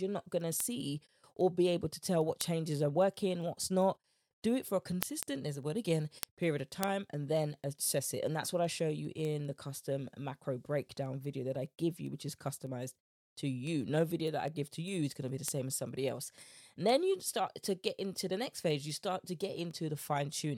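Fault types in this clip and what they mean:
Word clock ticks: from 0.2 to 20.5 s, ticks recur steadily about five times a second under the speech. The receiver runs on its own clock, unlocked to the sender's, so each slip drops or repeats one sample, a rate fitting roughly 100 ppm mismatch.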